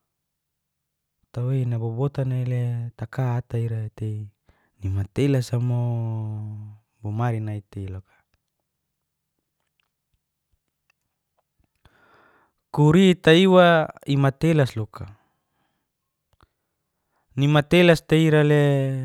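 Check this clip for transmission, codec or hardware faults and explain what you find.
No transmission, codec or hardware faults turn up anywhere in this speech recording, and the signal holds steady throughout without any technical disturbance.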